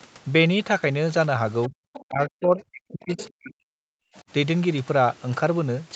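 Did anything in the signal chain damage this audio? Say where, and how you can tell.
Yes, the damage is in the call processing, specifically the echo canceller.

First, there's other side's voice leaking through. Short scraps of a second voice show up at 1.64 to 1.68 s, 1.94 to 2.03 s and 3.17 to 3.29 s, sitting well under the talker: about 30 dB down in the first, about 20 dB down in the other two. That's most likely loudspeaker playback bleeding into the mic and not fully cancelled, so the residual slips through in short scraps.

Then there's speech suppressed in double talk. Right after that first leak, from 1.68 to 1.77 s, the talker's level drops, and again across 2.05 to 3.74 s, where roughly a second of that stretch gets pulled down, at worst by something like 40 dB. The likely story is that both ends were talking at once, the canceller couldn't tell its own talker from the echo, and it ducked everything together.

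Last, background gated by the echo canceller: at 4.02 to 4.14 s the room tone itself dips hard, about 35 dB at the deepest, for about a tenth of a second, then comes back. That's the canceller clamping the mic while the far end plays and releasing once it lets go.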